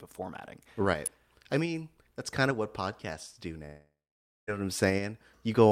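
Speech with two faults. At 1.06 s, just before "I mean that's kind", a sharp snap or tight cluster of clicks sits on top of the voice. It is most likely an electrical switching spike, a brief arc from a nearby switch or motor picked up by the audio line. The speech around it continues unbroken and nothing is missing, which separates it from a digital dropout or an edit click, where the signal itself jumps or is lost. A much longer break runs from 3.65 to 4.49 s, after "of what podcasts do". It is likely a long network dropout. About 0.82 s of audio never arrived. The receiver extended the last sound as a fading buzz or hiss, and the final 0.54 s or so is near silence before the speech resumes at "know what I'm" with the lost part gone. The smeared, decaying fill and the words skipped afterwards set it apart from a simple pause or a muted stretch.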